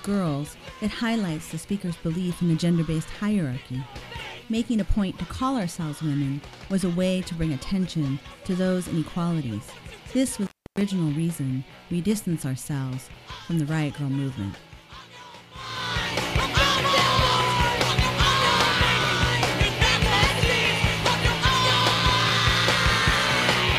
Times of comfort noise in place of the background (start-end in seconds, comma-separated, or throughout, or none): none